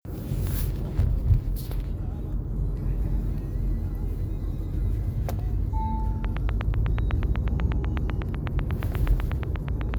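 From about 6.25 s to 9.95 s, a steady ticking sits on top of the sound: a train of clicks at a regular 8.1 per second, roughly thirty sharp pulses of near-identical shape, each standing well clear of the material at around 15 dB above it. The clicks carry on through quieter moments as well. The cause is likely an outside source injecting a repeating pulse into the signal path, such as interference from nearby equipment or a faulty connection or power supply.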